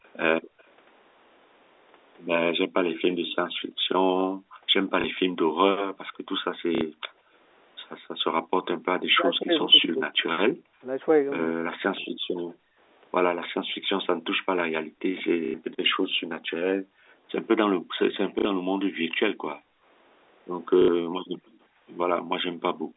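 From 0.06 to 0.62 s a faint delayed copy of the speech trails the talker by about 190 ms, sitting very low, around 40 dB down. This is an echo leak, likely from a speakerphone whose echo canceller left part of the loudspeaker signal in its microphone feed and sent it back.

The background is gated by the echo canceller from 0.41 to 0.59 s, and again in stretches between 3.14 and 8.13 s, totalling roughly a second and a half there. While far-end audio played, the canceller pulled the microphone down, by about 40 dB at its deepest. The room tone drops away and returns once the canceller releases.

Packet loss with the last packet repeated occurs at 5.01 s for 30 ms and at 6.75 s for 60 ms. The receiver filled each gap by replaying the previous audio block. The 30 ms fill is a small blip, and the 60 ms fill has a brief mechanical buzz. The 30 ms gap fits a single lost packet of that length, which would put the buzz of the two-packet run near 33 Hz.

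From 9.06 to 12.18 s the talker's speech is suppressed in double talk. The likely cause is that both ends spoke at once and the echo canceller, unable to separate near speech from loudspeaker echo, attenuated everything. Over roughly a second and a half in total, the voice dips hard, sometimes by around 40 dB. Within that span, background gating also hits from 10.52 to 10.81 s.

Gating resumes at 12.46 s and continues intermittently to the end, with roughly three seconds affected. The same pattern repeats: the ambience collapses by about 40 dB, then reappears.

Further repeated-packet losses fall at 15.45 s (90 ms), 18.39 s (60 ms) and 20.82 s (60 ms). Each is a short robotic stutter, and the 90 ms one is the longest.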